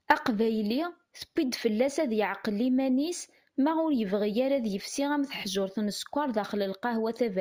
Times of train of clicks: none

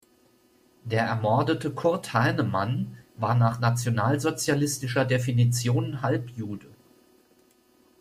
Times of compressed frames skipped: none

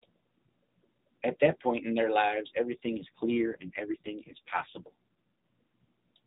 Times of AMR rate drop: 2.74-4.90

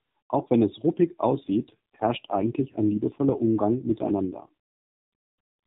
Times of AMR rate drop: 1.32-4.49

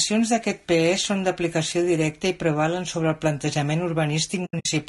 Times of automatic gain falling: none

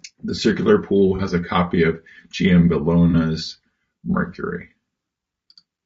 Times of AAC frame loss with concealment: 1.16-1.21, 3.10-3.15

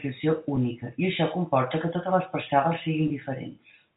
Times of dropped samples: none

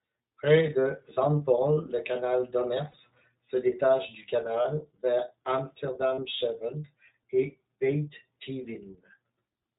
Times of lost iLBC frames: 1.14-1.18, 2.91-2.95, 4.62-4.66, 6.15-6.19

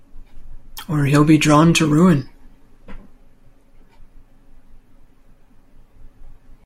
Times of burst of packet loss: none

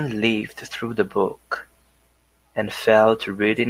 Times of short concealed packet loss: 0.39-0.43

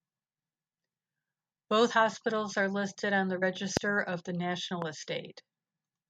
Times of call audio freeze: none

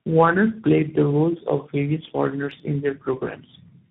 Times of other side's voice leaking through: none

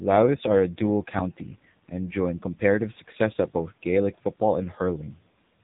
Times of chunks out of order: none

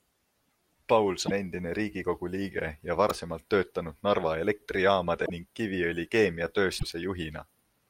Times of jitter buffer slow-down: none

